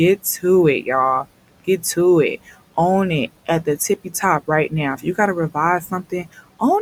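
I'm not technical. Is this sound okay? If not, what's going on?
No. Between 5.81 and 6.39 seconds, there is speech cut by the noise suppressor: the cleanup feature mistook parts of the speech for background noise and turned them down, so brief bits totalling a fraction of a second sound swallowed or faint. The quiet room noise underneath is simply part of the recording.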